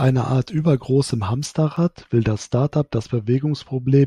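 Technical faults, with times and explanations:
1.46 to 4.06 s, de-emphasis applied wrongly: a treble-cut filter intended to undo pre-emphasis was applied to audio that had none, or was applied twice, tilting the response smoothly downward to about 10 dB lower at 10 kHz than at 1 kHz, so the speech turns dull and muffled.
1.77 s, damaged data in a compressed stream: corrupted bytes in the encoded stream caused the decoder to misread the frame there and lose sync while searching for the next valid frame header, producing a brief glitch in the speech.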